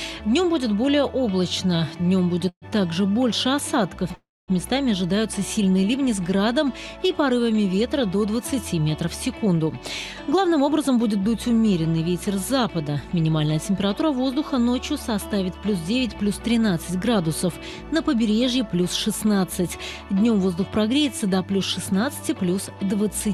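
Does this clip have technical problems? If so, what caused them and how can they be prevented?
Yes. Call audio freezes at 2.49–2.65 s and 4.15–4.51 s stretch the last sound into a fading buzz, then silence (about 70 ms and 230 ms). Playback resumes where it stopped, delayed by 132 ms and 329 ms, with nothing lost. Packets held up in transit likely emptied the jitter buffer. A steadier network path with less congestion, or a slightly deeper jitter buffer, would prevent these stalls.

Jitter buffer speed-up runs from 9.39 to 9.79 s at 110% speed, then from 10.25 to 14.36 s at 107%. The receiver, holding a backlog, cut short pitch-period slices repeatedly, about 50 ms and roughly 300 ms in total, so the audio sounds hurried at unchanged pitch. Smoother packet delivery avoids these backlogs, and gentler catch-up settings would spread any remaining correction more thinly.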